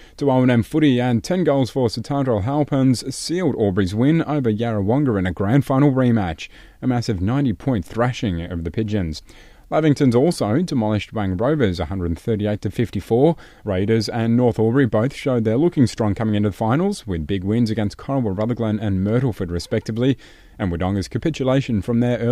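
Right at 20.66 s a mains hum comes in and runs to the end of the clip: a steady low 60 Hz drone sitting roughly 30 dB under the speech. That's the power line bleeding into the signal, most likely from a ground loop or a transformer nearby.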